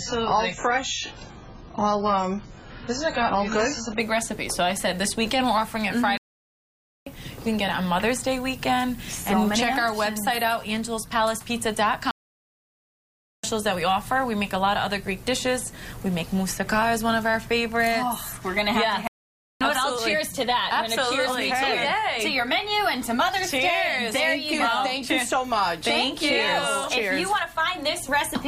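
For the first 4.0 s, the audio plays from an adaptive stream starting at a low bitrate. The treble is missing or synthetic, and codec artefacts are stronger. The sound fits a very low AAC rate. At 4.0 s, quality jumps with no gap, which fits a step up to a much higher rate.

Three playback stalls follow. The sound cuts to silence at 6.17 s for 0.89 s, at 12.11 s for 1.33 s, and at 19.07 s for 0.53 s. Each time it resumes abruptly. The likely cause is the player running short of data.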